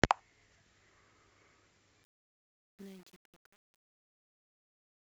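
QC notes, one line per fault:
2.04–5.09 s, truncation distortion on a fade: as the speech fades out from about 2 s to the end at 5.09 s, the level drops smoothly, but the quiet tail turns gritty. The fade stage keeps too few bits and adds no dither, which fits roughly a 9-bit word. Near the smallest step, the waveform collapses into a few square steps. A spectrogram shows the harmonics giving way to broadband grainy noise.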